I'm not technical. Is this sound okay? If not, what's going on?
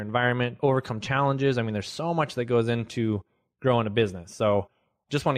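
Yes, nothing wrong can be heard in this recording.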